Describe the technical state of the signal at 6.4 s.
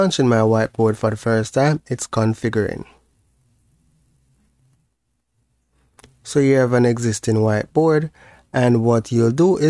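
At 6.4 s the signal is intact, with no audible fault at that moment.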